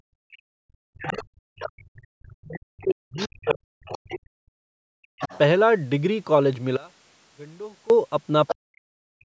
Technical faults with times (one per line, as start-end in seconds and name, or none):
0.00-5.24 speech suppressed in double talk
1.01-1.13 other side's voice leaking through
1.80-4.08 other side's voice leaking through
5.23-5.38 other side's voice leaking through
6.77-7.90 one channel inverted
8.47-8.55 other side's voice leaking through
8.54-9.24 speech suppressed in double talk